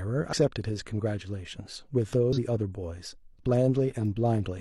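Damaged data in a compressed stream strikes twice, from 0.28 to 0.33 s and from 2.33 to 2.38 s. Corrupted bytes make the decoder misread frames and hunt for the next valid header, so each stretch of speech briefly gives way to a short glitch of roughly 50 ms.

A bit error spike follows at 4.05 s. A single flipped bit throws one sample's value off by a power of two before it snaps straight back, producing one sharp, broadband tick that has nothing to do with the surrounding speech.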